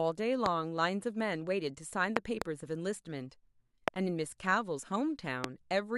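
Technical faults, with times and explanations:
0.46–0.48 s, 2.17–2.44 s, 3.88–3.90 s and 5.44–5.46 s, loud pop: sharp pops jump out roughly 20 to 25 dB above the speech, a double pop in the 2.17 s one, while the talking carries on underneath, likely from a sudden voltage spike like a switch, static or a driver glitch.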